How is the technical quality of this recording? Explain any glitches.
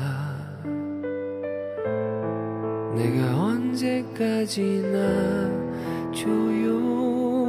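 No glitches turn up anywhere in this recording. Nothing in it calls for a technical explanation.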